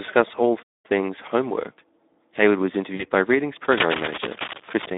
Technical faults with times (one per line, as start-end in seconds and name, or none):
0.00-4.97 Speex codec
2.95-3.05 VoIP packet loss concealed by the speech codec
3.64-4.86 cable scratch noise